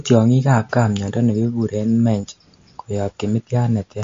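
MP3 compression runs throughout the speech, with nothing above 7.2 kHz and plainly audible swirling, watery artefacts. The likely cause is an encoder short of bits, which fits a bitrate around 45 kbps, cutting the treble and letting weak frequency lines flicker between frames.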